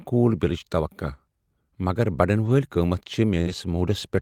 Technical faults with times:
2.45-2.51 lost packet rebuilt from error correction
3.41-3.48 burst of packet loss
3.46-3.52 lost packet rebuilt from error correction

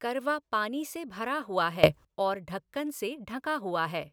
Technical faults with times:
1.83-2.05 sudden gain jump

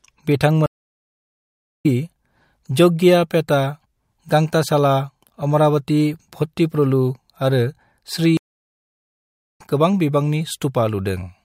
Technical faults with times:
0.66-1.86 stream reconnect
8.37-9.61 stream reconnect

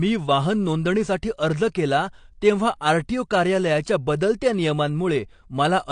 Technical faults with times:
0.00-5.92 AAC compression

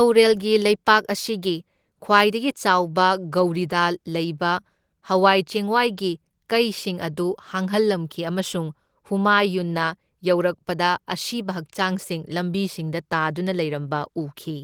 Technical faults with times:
none

